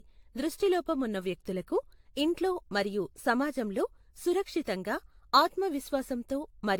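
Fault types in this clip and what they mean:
Generation loss: the speech sounds swirly, hollow and smeared, attacks are blurred and nothing sits above 19.1 kHz. That's more damage than one AAC-LC pass near 96 kbit/s explains, so it was likely re-encoded around seven times, with quantisation noise piling up.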